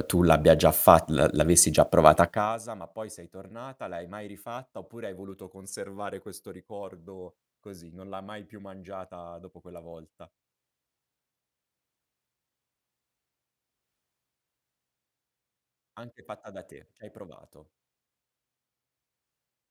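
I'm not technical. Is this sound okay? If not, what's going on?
No. From 2.23 to 2.60 seconds, as the speech gets much quieter, a fast ticking or zipping rides on it. This is zipper noise: the volume is lowered in small jumps, about thirty a second, instead of gliding down smoothly, and each jump clicks.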